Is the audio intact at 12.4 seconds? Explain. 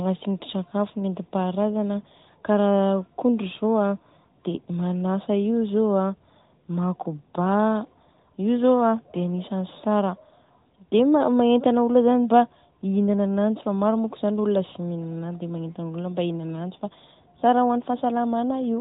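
Yes, at 12.4 seconds the audio is intact, with nothing there beyond the narrowband character of the AMR mobile codec carrying it.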